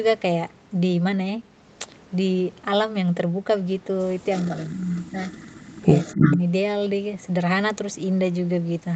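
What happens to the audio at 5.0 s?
At 5.0 s two things overlap. There's an echo leak running from 4.32 to 6.37 s: a delayed copy of the speech trails about 318 ms behind, sitting roughly 10 dB under the main voice. It's likely a loudspeaker on one end whose echo canceller didn't fully strip what its mic picked up.

On top of that, from 4.5 to 5.21 s you get speech suppressed in double talk. The voice dips and breaks up for about half a second in total, by roughly 15 dB at its deepest, likely because the canceller couldn't tell the talker from the echo and pulled both down.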